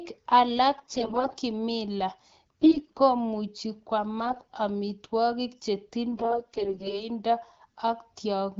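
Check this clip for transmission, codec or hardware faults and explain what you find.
There is one transmission fault: bursts of AMR bit errors in the speech. The wideband codec underneath sounds clean, which fits a rate of about 12.65 kbit/s.

The AMR bit errors occur from 0.75 to 1.32 s, 2.61 to 3.00 s, 4.25 to 4.51 s and 6.12 to 7.09 s. The link flipped about 15% of the frames' weakly protected bits in the first two bursts and about 10% in the last two. The checksum on the key bits still passed, so the frames were decoded anyway. The excitation pulses landed in the wrong places. Fine pitch, gain and spectral values drifted. Pitch and level hold roughly steady, but the voice turns hoarse, scratchy and gargly. The first two bursts are the hardest hit.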